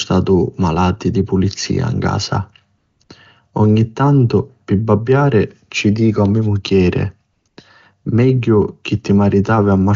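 At 2.77 to 2.99 s, then 3.03 to 3.09 s, the speech gives way to AMR comfort noise. The phone judged the talker silent and stopped sending speech frames. The receiver then filled the gap with synthetic hiss built from a rough sketch of the background. The real room sound drops out and a smooth, even noise switches in. It happens twice more, at 7.33 to 7.45 s and 7.47 to 7.57 s. Around it, the AMR wideband (HD Voice) codec sounds clean, which fits its top 23.85 kbit/s rate.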